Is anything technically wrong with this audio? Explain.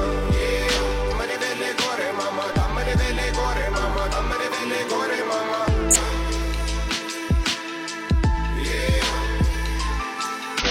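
Yes. There is damaged data in a compressed stream at 1.07–1.13 s, 5.90–5.96 s and 10.59–10.65 s. Corrupt bytes make the decoder misread frames and lose sync, so each spot produces a brief chirp or blip of about 60 ms.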